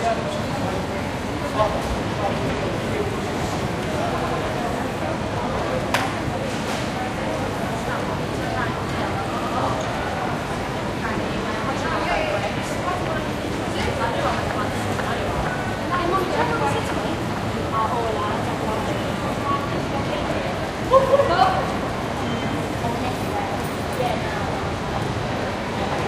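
Fresh audio twice failed to reach the output in time, so the device replayed its last buffer, a repeated buffer fault. From 4.18 to 4.37 s and from 9.38 to 9.57 s, a 93 ms slice, which fits a 4096-sample buffer, sounds three times with hard joins, a brief stutter.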